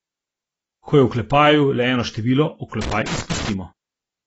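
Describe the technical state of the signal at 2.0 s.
At 2.0 s the speech carries plainly audible AAC compression, present across the whole clip. Nothing reaches above 8 kHz, and the damage sounds like a low-bitrate AAC-LC encode, likely around 24 kbps. Such an encoder quantises its frequency lines against a hearing model, narrowing the band and either leaving spectral holes or filling bands with substitute noise. What separates this from a plain low-pass filter is the smeared, warbling or fizzy texture on sustained sounds and sibilants, not just a duller top end.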